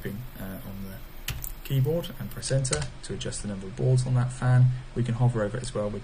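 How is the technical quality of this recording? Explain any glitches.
The recording has one quality fault. From 2.40 s to the end, the adaptive stream switches to a lower bitrate. Nothing is left above 9.6 kHz, so the treble goes dull, and coding artefacts such as swirly, smeared detail increase. This fits a player falling back from about 96 to 32 kbit/s AAC when the connection slowed. The change is sudden and has no gap or stall, which distinguishes it from a rebuffering dropout. The added artefacts distinguish it from a plain low-pass filter.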